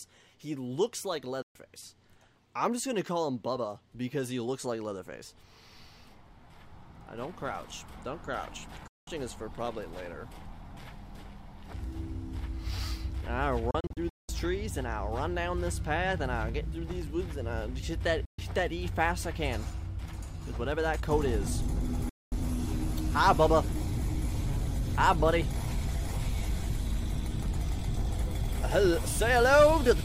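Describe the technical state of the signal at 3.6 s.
At 3.6 s the signal is intact, with no audible fault.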